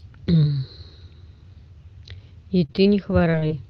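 Speech clip with repeated packet loss (robotic sound) from 2.59 to 3.52 s: dropouts up to 30 ms, filled by stretching prior sound, appear as smeared, repeated spectrogram slices and choppy waveform.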